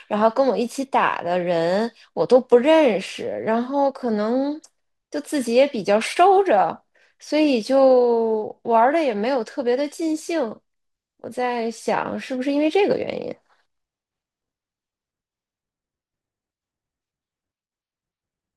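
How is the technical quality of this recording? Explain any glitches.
No technical faults can be heard in this speech recording. There are no glitches to explain.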